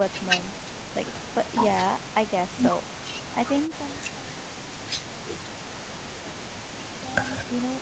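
Speech, band-limited to 8 kHz by call microphone processing, with some gradual fader-style level changes, and no technical fault to report.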